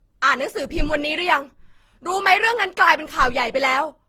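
Generation loss runs through the whole speech recording. The texture is swirly and hollow, with a smeared quality and softened attacks, more degraded than a single lossy encode at this quality would produce. Content extends to about 20.3 kHz. The character points to an Opus chain around 48 kbit/s, likely decoded and re-encoded roughly ten times, with each pass quantising on a shifted frame grid so that noise accumulates.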